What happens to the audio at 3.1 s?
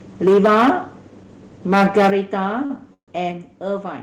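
At 3.1 s the speech stalls: from 2.94 to 3.13 s the last sound is stretched into a fading buzz, then drops to silence before picking up exactly where it stopped, now about 140 ms later. This is a call audio freeze, likely from delayed packets draining the jitter buffer.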